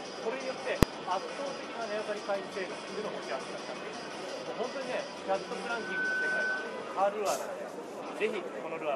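There's a single sharp bang at about 0.83 s, and it's a case of invalid numbers at full scale. Somewhere in the processing chain a calculation blew up into infinite or invalid values, and those got pinned to the maximum output level for one short block. That block lasts about 1.33 ms, which fits a 64-sample processing block. It's far too brief for the start and end pops to separate, so the whole thing lands as one loud hit on the sound.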